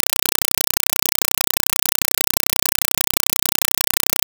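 Compressed stream played as audio, throughout: an undecoded Dolby Digital bitstream is read as samples, so each frame becomes a 4 ms noise burst and then silence, 31.25 times a second. Very loud, chattering static replaces the speech, which fits a 192 kbps stream.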